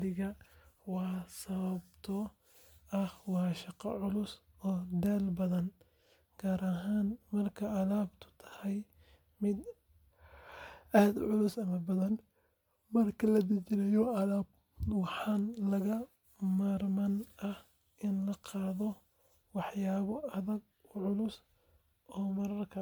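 Across the whole speech clip there is a swirly, hollow smear and softened consonant attacks, with no content above about 20.1 kHz. This is generation loss, likely from the audio being encoded around seven times as MP3 at a rate that fits 128 kbit/s. A single encode at that rate would sound fairly clean. Here each pass requantised on a shifted frame grid, stacking noise and spectral holes into far more damage than the bitrate alone explains.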